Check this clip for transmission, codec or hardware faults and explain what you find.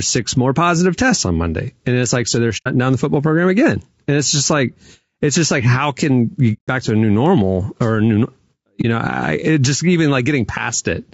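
Two faults affect the speech: low-delay codec damage throughout and three short dropouts.

Low-delay AAC compression, likely AAC-ELD, runs through the whole 11 seconds. Its short frames resolve pitch harmonics poorly and spend bits fast, which fits about 32 kbps. The voice sounds plainly rough and grainy, with noise between harmonics and a thinned, synthetic top band.

AAC frame loss with muting occurs three times. The decoder received no data for these frames, zeroed their spectrum, and the overlapping windows faded the sound out and back in. The first two are soft-edged holes and the last is a brief dip:
2.57–2.68 s, about 90 ms lost, between "it's like so they're" and "down the football program";
6.53–6.69 s, about 150 ms, between "like how can you" and "back to a new";
8.81–8.85 s, about 30 ms, between "normal or a new" and "know I it just".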